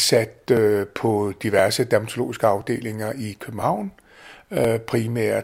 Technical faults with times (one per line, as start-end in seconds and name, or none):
0.57-4.64 periodic USB or driver dropouts